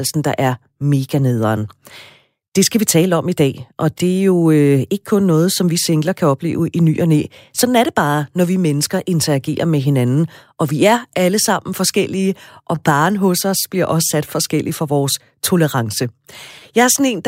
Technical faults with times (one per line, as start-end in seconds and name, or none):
none